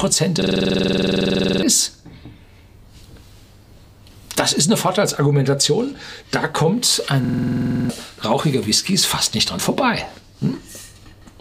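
From 0.42 to 1.63 s and again from 7.25 to 7.90 s, a system hang loop repeats one 46 ms slice at 21.5 Hz, which fits a 2048-sample buffer, giving a rapid buzzing stutter. Roughly a second, then under a second, of sound is lost.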